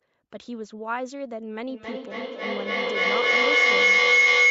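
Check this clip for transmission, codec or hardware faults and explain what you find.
There's one real fault here, a feedback howl. From 1.69 s to the end, a tone around 2 kHz swells to about 15 dB over the speech, pulsing roughly every 300 ms. That's a mic-to-speaker loop gaining level on each pass, with two devices in one room. The audio stops around 8 kHz, which fits an Opus call path.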